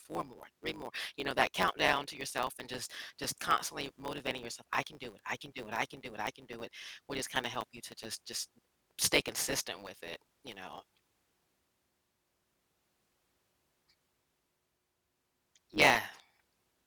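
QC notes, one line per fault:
Throughout: block size mismatch (truncated). A steady 100 Hz buzz runs under the speech, and the speech plays about 1.09 times faster than normal while keeping its timbre. One stage hands over blocks longer than the next stage takes in, so the tail of every block is discarded. Each cut leaves a small discontinuity at the block rate, heard as the buzz, and the dropped material shortens the timeline by the ratio of the two block sizes.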